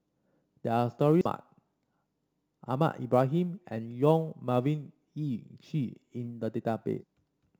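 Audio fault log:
throughout, sample clock jitter: a faint hiss and roughness riding on the speech, louder on sharp, bright sounds, gone in pauses, from unsteady converter clock timing of a few microseconds, roughly 35 dB down.
1.21 to 1.26 s and 6.97 to 7.03 s, damaged data in a compressed stream: brief glitches as the decoder misreads corrupted frames, loses sync and hunts for the next valid frame header.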